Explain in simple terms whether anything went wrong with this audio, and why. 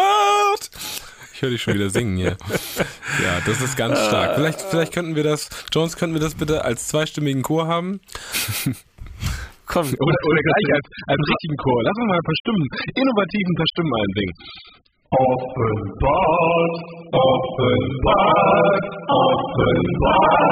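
Something went wrong at 9.98 s: an adaptive stream at a lower bitrate. The connection slowed, so the player switched to a cheaper version that lasts to the end, losing all treble above 5 kHz. Unlike a buffering stall, there's no gap or pause.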